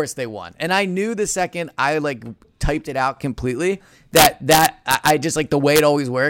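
A speech recording broken by harsh, violent cracks from 4.16 to 5.10 s and again briefly from 5.76 to 5.80 s, far sharper than ordinary clipping. This is integer overflow. The gain pushed loud peaks to about 0 dB overdrive, just past the integer ceiling, and rather than being held there those samples wrapped around to the opposite sign. Each one jumped across the full range, producing the cracks.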